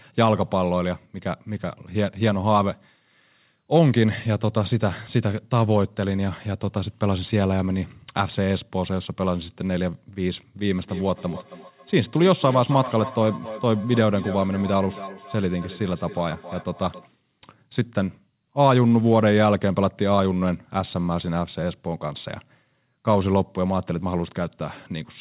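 A speech recording carried over a narrowband call path, with nothing above 4 kHz, which fits G.711 mu-law coding. From 10.74 to 17.1 s there is feedback echo between two devices: each phrase returns at a steady interval of roughly 300 ms, at most about 14 dB below the speech. The repeats grow thinner and more ringing on each pass, which sets this apart from single-device echo or room reverberation. One device plays the other's audio aloud and the other device's microphone picks it up again, and neither echo canceller removes it.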